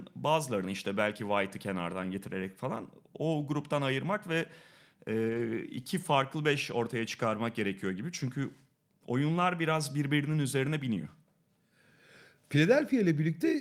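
A lost packet rebuilt from error correction breaks into this speech clip from 5.29 to 5.39 s. Packets went missing in transit, and the decoder filled the hole with the low-bitrate backup copy that the next packet carried, so no silence opens up. About 60 ms of sound comes from that backup, which fits three lost packets, and those frames sound coarser and grainier than the audio on either side.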